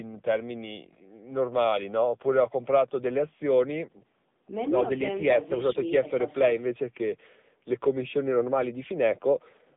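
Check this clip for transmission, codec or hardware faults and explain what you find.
The speech carries one fault for its whole length: AMR narrowband mobile codec damage. The AMR-NB codec rebuilds the voice from a vocal-tract model excited by a few pulses per subframe. The plainly audible buzzy, synthetic edge points to a low mode near 8 kbps. The line passes roughly 150 Hz to 3.7 kHz. On a spectrogram, energy stops flat at about 3.8 kHz with almost nothing below 150 Hz, and harmonics look smeared and blocky.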